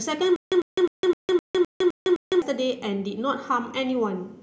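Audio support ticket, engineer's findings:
Stutter with silent gaps, 0.36–2.42 s. Same ~100 ms burst of speech repeats eight times, every 257 ms, with ~156 ms digital silence between. Likely player/stream stall: each retry replays last buffered fragment, then runs dry. Underlying audio for that span lost.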